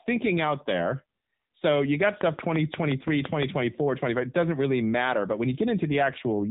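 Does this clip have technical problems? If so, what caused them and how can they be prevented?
Yes. The whole clip has passed through an AMR narrowband mobile codec. Nothing above 3.8 kHz survives, so the speech sounds boxed-in and thin. The codec rebuilds speech from a vocal-tract model fed by a few pulses per frame. Here the damage is plainly audible: buzzy, synthetic edges on the speech. That fits a low AMR-NB mode of around 8 kbps. To prevent it, route the call over a wideband path, or record locally instead of over a mobile link.

From 2.03 to 3.44 s there is a train of clicks. About ten sharp ticks arrive at a steady 5.74 per second. Each has the same shape and peaks roughly 15 dB above the speech. The regular pace points to a repeating fault rather than random noise. The likely cause is electrical interference from nearby equipment or a faulty connection or power supply injecting pulses. 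To prevent it, move interfering devices away and check cables, grounding and the interface connection.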